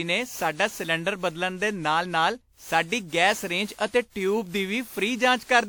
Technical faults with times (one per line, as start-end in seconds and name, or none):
0.00-5.69 generation loss